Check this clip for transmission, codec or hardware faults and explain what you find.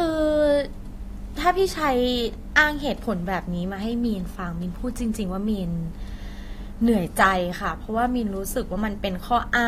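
Three brief faults appear in this speech clip, all of the same kind.

Dropped samples, at 2.40 s, 4.51 s and 6.58 s: the likely cause is that a handful of samples, roughly a tenth of a millisecond's worth, went missing from the stream at each point. The waveform therefore leaps straight from one value to a later one, and that discontinuity sounds like a single sharp click. Far too little audio is lost for any of the sound to go missing.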